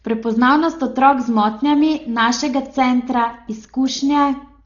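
Throughout the speech the sound is dull and boxed-in, with nothing above about 6.9 kHz, and a rough, fluttering noise hangs around the voiced tones. The damage is heavy and is likely Dolby Digital compression at a very low rate, which fits roughly 32 kbps. Starved of bits, the encoder narrowed the band and left many frequency lines empty, and the decoder filled those gaps with dither noise, producing that grainy flutter.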